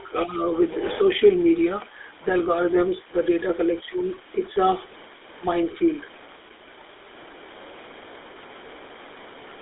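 Low bit depth without dither runs through the whole speech recording: a grainy distortion that shifts with the signal and sits only about 20 dB below it, with quiet stretches turning gritty and sputtering. The likely cause is truncation to very few bits with no dither, which fits a 6-bit signal.

The GSM full-rate codec is present from start to finish as well, limiting the band to roughly 300 Hz to 3.6 kHz. Its pulse-driven vocal-tract model produces the plainly audible buzzy, gravelly roughness, which points to the 13 kbps GSM coder.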